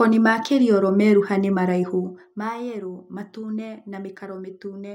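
From 1.90 to 2.37 s, just after "meruha nĩ", the gain drops roughly 15 dB in unsmoothed steps, several hundred per second, producing zipper noise: a fine buzzy ticking over the speech.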